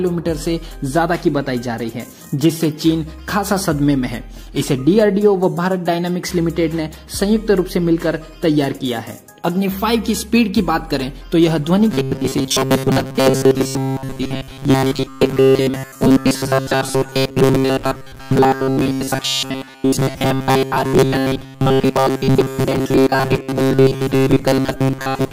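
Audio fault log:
11.91 to 25.32 s, robotic sound from repeated short buffers: a rigid, metallic buzz fixed at 133 Hz, likely from a roughly 7.5 ms slice looped while most new audio went missing. Unlike a steady hum, the buzz still follows the sound's rough contour.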